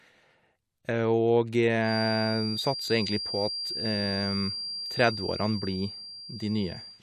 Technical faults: feedback whistle

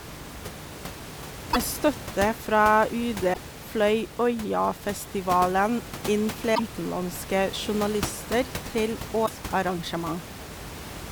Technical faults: broken MP3 bit reservoir

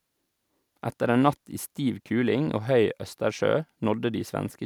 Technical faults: none

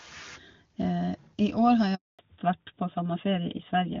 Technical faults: handover gap; fallback to narrowband

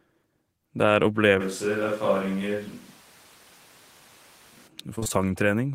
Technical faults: switch to a distant microphone; repeated packet loss (robotic sound)

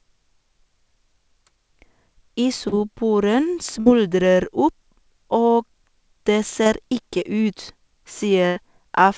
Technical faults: short concealed packet loss; burst of packet loss

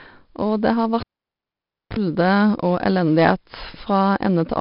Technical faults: 4-bit ADPCM compression; cable pulled and plugged in

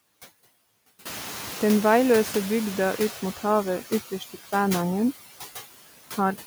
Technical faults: noise suppressor artifacts; noise suppressor catching up

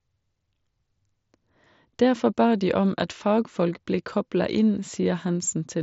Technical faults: none

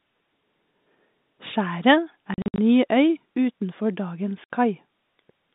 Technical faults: packet loss filled with silence

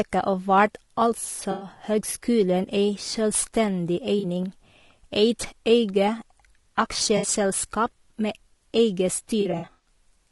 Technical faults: low-delay AAC compression; AAC frame loss with concealment

